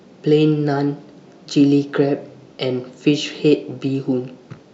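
No audible technical faults.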